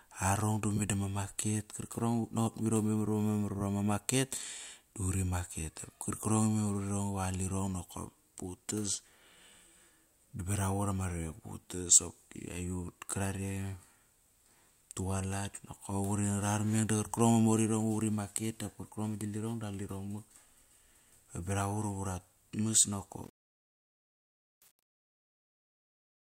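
From 23.24 s to the end at 26.38 s, the fade-out of the speech shows truncation distortion on a fade. The gain stage drops low-order bits without dither, which fits an 8-bit path. As the level sinks, the tail turns gritty. On the waveform the decaying signal flattens into a few square steps; the spectrogram shows broadband hash stuck to the fading harmonics.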